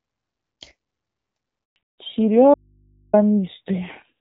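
At 1.64 s the speech stops dead for 120 ms, until 1.76 s. This is a handover gap. The call switched networks and no speech frames arrived during the switch. The voice dies within milliseconds, and whatever was said then is lost.

From 1.76 s to the end, the sound changes. This is a fallback to narrowband. Before it, the wideband HD Voice codec gave clear speech with only light coding damage. Now nothing remains above 4 kHz. The voice turns dull and rough. The sound fits a drop to AMR narrowband at about 7.4 kbit/s.

From 2.54 s to 3.13 s, about 590 ms, the speech cuts out abruptly. This is an audio dropout to a faint residue. Only mains hum remains, around 40 dB below the speech. The likely cause is a lost signal while the path after the break stayed live.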